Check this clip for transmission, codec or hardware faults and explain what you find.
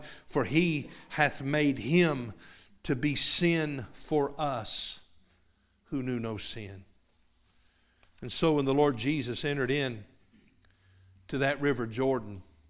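No faults can be heard anywhere in this speech.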